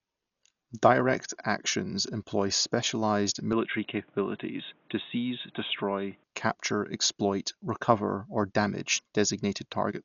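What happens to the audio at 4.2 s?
At 4.2 s the sound is inside a stretch from 3.53 to 6.24 s where the input has likely switched to a poorer device. The band stops near 3.8 kHz, so the audio turns boxy and dull with a faint new noise floor, well below the signal, at an unchanged level and with no silence at the switch. On a spectrogram the top edge drops abruptly there and returns at 6.24 s.

Underneath, across the whole clip, is heavy damage from likely Dolby Digital compression at a rate that fits about 48 kbps. Nothing survives above 6.9 kHz. Starved frequency lines are filled with dither noise, giving a dull tone with rough flutter around tones, seen as a hard ceiling and speckled, smeared harmonics.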